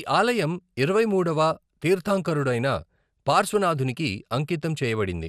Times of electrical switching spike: none

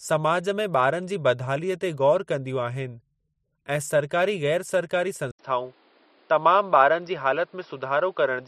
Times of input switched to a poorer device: 5.31-8.48

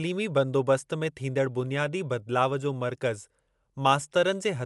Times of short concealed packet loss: none

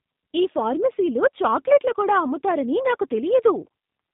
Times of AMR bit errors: none

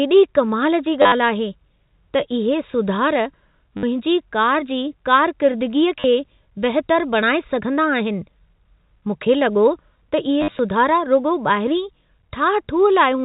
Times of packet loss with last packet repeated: 1.02-1.12, 3.77-3.83, 6.00-6.04, 10.41-10.59

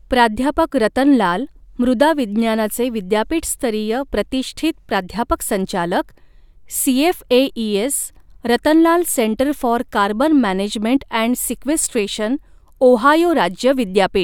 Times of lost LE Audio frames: none

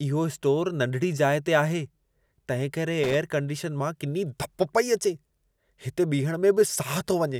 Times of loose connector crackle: 3.04-3.14

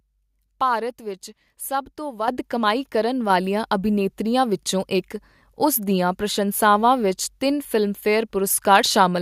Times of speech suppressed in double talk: none

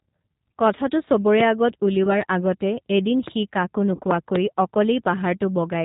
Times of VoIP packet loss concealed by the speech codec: 0.34, 2.04-2.21, 3.95-4.01

